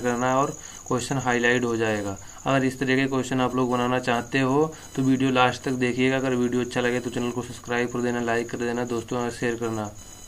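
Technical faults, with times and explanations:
Throughout, computer activity noise: a thin buzzing chirp, pulsing at around 1 kHz and sitting about 30 dB below the sound, rises and falls with processor, graphics or mouse load rather than with the audio, because those load swings disturb the ground shared with the audio circuit.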